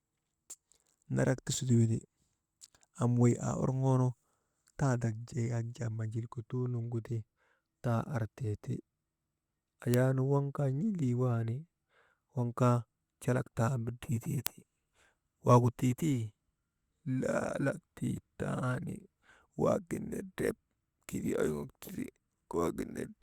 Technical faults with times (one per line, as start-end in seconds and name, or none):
9.94 bit error spike
14.47 bit error spike